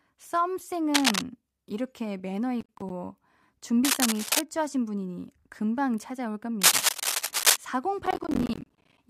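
A worn cable or connector being moved is the likely cause of cable scratch noise from 0.94 to 1.22 s: the shifting contact adds ragged bursts of rustling noise, about 5 dB above the speech. From 2.61 to 2.90 s, the processor misses a run of audio buffer deadlines in a row, producing processor overload crackle. Each missed buffer drops out to silence with hard edges, and the string of tiny gaps, fitting buffers of around 10 ms, sounds like gritty tearing. The same scratching returns from 3.84 to 4.41 s at about the level of the speech, and again from 6.61 to 7.57 s at about 5 dB above it. A longer crackle burst runs from 8.06 to 8.98 s.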